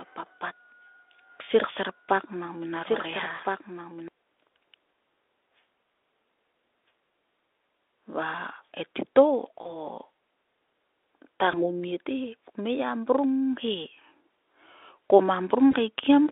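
From the start until 4.08 s, a doubled audio track runs underneath: a dry copy about 5 dB quieter trails by roughly 1.5 s, likely a second, slower capture path. It shows as a repeated waveform pattern that ends abruptly.

VoIP packet loss, concealed by the speech codec, strikes at 3.35 to 3.40 s, 9.61 to 9.76 s, 11.51 to 11.71 s (just before "te he") and 15.71 to 15.75 s. Each gap is about 20 to 40 ms of lost audio, consistent with one or two dropped frames. The decoder stretches the last sound into a fading buzzy tone or coloured noise, which appears on a spectrogram as smeared, flat energy that falls away.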